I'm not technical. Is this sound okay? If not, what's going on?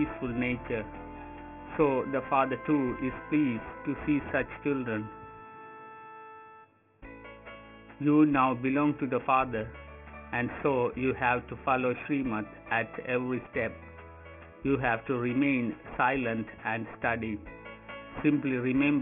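No. The whole clip has a fault called aliasing. The sound was shrunk to a much lower quality without first removing its high tones, so those tones fold back down as false, unrelated ones below about 3 kHz. The sound points to a rate of around 6 kHz. Plain muffling would just make things dull. Here the sharp parts instead turn gritty and metallic, with harsh fizz crowded up against that 3 kHz ceiling.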